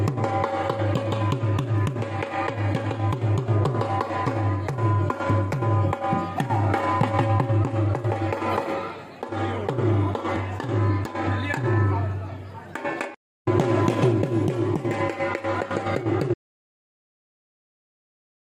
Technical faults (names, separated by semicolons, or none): audio dropout to silence